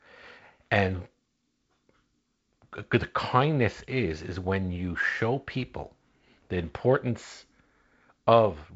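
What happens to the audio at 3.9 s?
Nothing goes wrong at 3.9 s; the speech passes through intact there, carried by the G.722 wideband telephone coding with its light hiss and nothing above about 7.7 kHz.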